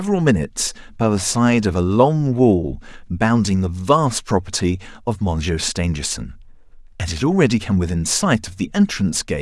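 A short speech recording with no technical faults to report. Nothing in it points to a problem in the recording or playback chain.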